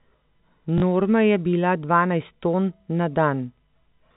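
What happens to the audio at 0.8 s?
From 0.78 to 0.82 s, a 40 ms stretch of the speech is lost to packet loss with the last packet repeated. The receiver fills the gap by replaying the previous chunk, which fits two 20 ms packets. The run takes on a brief 50 Hz robotic buzz. Unlike a zero-filled dropout, there's no silent hole, just a stuttering echo within the 4 kHz telephone band.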